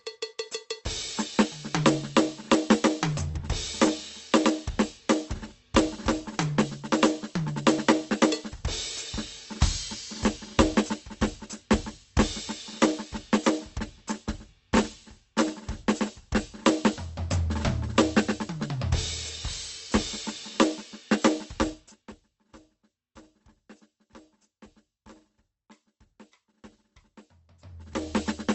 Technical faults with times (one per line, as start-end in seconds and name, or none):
3.31-3.36 short concealed packet loss
21.68-22.20 zipper noise